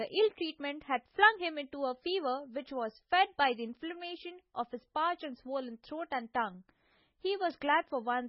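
Speech, with heavy damage from MP3 compression throughout. Nothing is present above 5.6 kHz, and the sound is watery and swirly as weak frequency lines drop in and out between frames, with smeared attacks and metallic chirps on s sounds. This likely comes from encoding at a very low bitrate, consistent with about 16 kbps.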